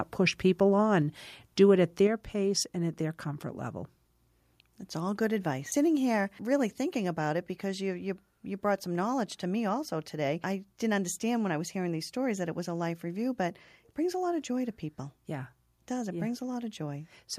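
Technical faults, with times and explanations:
1.02 s, 2.07 s and 6.39 s, microphone volume stepped down: the speech and the background beneath it drop in level together, each time in a single abrupt step rather than a gradual fade, by about 2 dB, about 4 dB and about 1 dB respectively. The likely cause is the call software judging the microphone too hot and lowering the device's input volume in one step, so everything captured afterwards arrives quieter.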